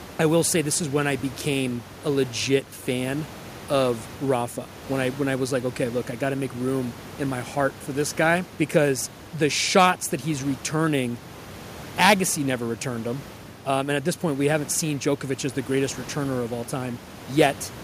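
No technical faults can be heard in the speech; the only thing beneath it is the room's own background noise, sitting about 19 dB below the voice as part of the original recording.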